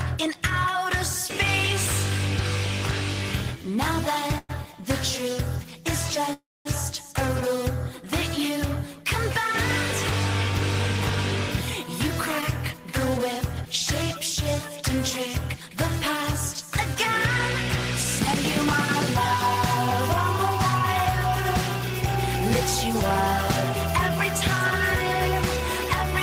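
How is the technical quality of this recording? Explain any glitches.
The recording has several network-related glitches: two pauses where the audio stalls, one brief dropout, and two stretches that run slightly fast.

Call audio freeze, 4.38 to 4.51 s and 6.33 to 6.67 s: The sound stops moving forward and its last moment is drawn out into a fading buzz. The first stall lasts about 0.11 s and ends in a short 20 ms silence. The second lasts about 0.32 s, and 240 ms of that is silence. Afterwards the audio picks up exactly where it left off, so nothing is skipped but a gap has been inserted. The likely cause is packets held up in transit while the receiver's jitter buffer ran dry, leaving the receiver to stretch the last sound until data arrived.

Short concealed packet loss, 12.41 to 12.44 s: A quick smear or wobble replaces about 20 ms of sound. That audio never reached the decoder in time, so the receiver patched the hole with a brief continuation of what came before, then blended back into the real signal.

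Jitter buffer speed-up, 12.77 to 13.66 s and 15.54 to 16.70 s: The audio runs a little fast while the pitch stays the same, at about 103% speed in the first stretch and 104% in the second. The receiver was holding more buffered audio than it wanted, so it cut out tiny pitch-period slices repeatedly to bring the delay down. It removed roughly 40 ms in the first stretch and roughly 50 ms in the second.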